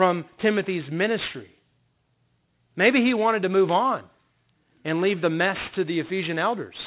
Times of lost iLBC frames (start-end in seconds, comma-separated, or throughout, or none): none